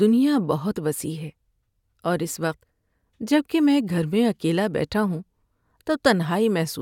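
No technical faults can be heard anywhere in the recording.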